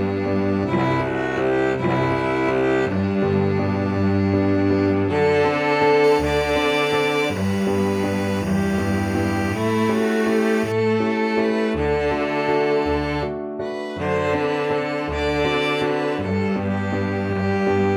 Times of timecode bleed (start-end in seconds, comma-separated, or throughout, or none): 6.04-10.72